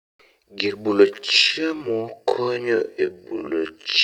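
From 1.04 s onward, speech abruptly drops to half pace at unchanged pitch, sounding dragging: a time-stretched section, likely software repeating short pieces.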